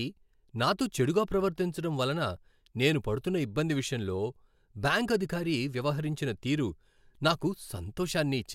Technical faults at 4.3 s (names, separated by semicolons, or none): none